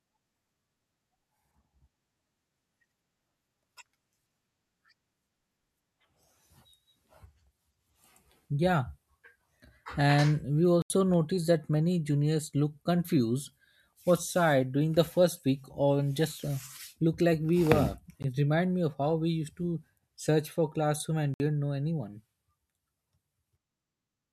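At 10.82 s the speech drops into a block of digital silence lasting 80 ms, just before "noticed that many juniors"; a 15 ms one at 18.23 s falls between "look like we were" and "reminded me of how", and a 60 ms one runs 21.34–21.40 s after "search for classroom and". Samples were zeroed, as when output isn't supplied in time, so the waveform flatlines with abrupt edges, seen on a spectrogram as blank columns.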